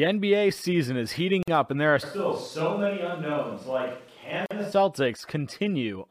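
A gap at a join of encoded pieces appears at 1.43 to 1.48 s, between "season is heating" and "up and there are": a 49 ms gap with smeared edges, left by encoder start delay and last-frame padding that were never trimmed. A switch to a distant microphone follows at 2.04 s, just after "up and there are", and lasts until 4.71 s. The speech turns roomy and hollow with thinner bass, drops by about 5 dB, and carries room noise about 30 dB below it; the close microphone's signal likely failed or was left out. Within that stretch, another gap at a join of encoded pieces cuts in at 4.46 to 4.51 s, a 46 ms gap from the same untrimmed encoder padding, after which the sound resumes where it stopped.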